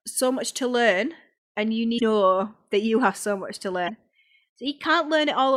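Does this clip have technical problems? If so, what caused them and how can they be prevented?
Yes, there's damaged data in the compressed stream: two short glitches, at 1.98 to 2.02 s after "to learn and you" and at 3.86 to 3.90 s after "have so much to". Corrupted bytes there threw the decoder off sync while it hunted for the next frame header. Checksummed transfers and reliable storage would prevent it.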